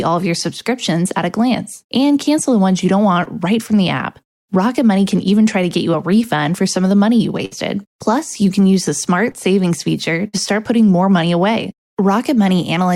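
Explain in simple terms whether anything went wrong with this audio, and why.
At 3.23 s and 9.31 s there is short concealed packet loss: 20 and 40 ms of audio arrived too late, and the receiver patched each hole by extending the preceding sound, leaving a brief smear.

At 7.45 s and 10.28 s comes a burst of packet loss: about 60 ms each time went missing. The receiver continued and faded the last sound, then skipped ahead.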